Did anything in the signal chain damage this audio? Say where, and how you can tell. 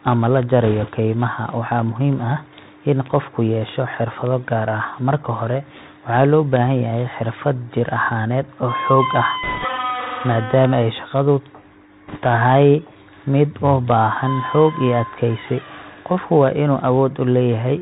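Yes. The codec stage is the first problem: the whole clip of speech has gone through the Bluetooth CVSD headset codec, and the damage is plainly audible. Nothing above 4 kHz survives, so the speech sounds boxed-in. A granular hiss sits under it throughout, and s sounds come out scratchy. Loud, bright passages distort where the one-bit delta modulator's adaptive step can't climb fast enough. That character fits the 64 kbps CVSD link.

The network or radio link adds a second fault: bit errors on a Bluetooth voice link at 0.64–0.89 s, 9.43–9.65 s and 12.08–12.19 s. Each burst is a rushing, crackly noise laid over the speech, without sharp clicks. That fits CVSD, where every bit carries the same small weight and a flipped bit's error decays away. The density suggests an error rate of a few percent, slightly heavier in the last burst.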